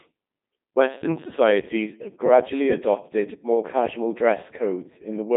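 From start to finish the speech has passed through the Codec 2 vocoder. Rather than carrying the waveform, this codec reduces the voice to pitch, voicing, loudness and a rough spectral shape, then rebuilds it from sine waves. The result is heavily damaged: robotic, buzzy, with nothing above 3.8 kHz and little below 150 Hz, a character that fits a rate around 2.4 kbit/s. Unlike a starved waveform codec's swirling or warbling, this sounds synthetic: a steady machine-like buzz.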